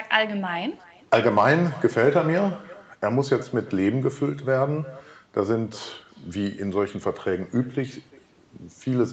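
Speech runs through the whole clip, with nothing above 8 kHz, as a call path leaves it. Echo with no canceller is present throughout. Every phrase comes back roughly 0.4 s later. The copy is about 21 dB quieter and thinner. The far end's loudspeaker fed its own microphone. Nothing removed that before the round trip back.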